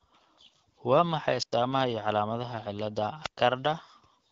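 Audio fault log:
1.38–1.54 s and 3.22–3.38 s: wireless microphone squelch dropout, twice. Each time the radio link from the FM microphone weakens, so hiss and static rise as the receiver loses a clean carrier. The receiver's squelch then shuts the output, leaving a hole of near silence of about 96 ms in the first dropout and 116 ms in the second. The speech returns once the signal recovers.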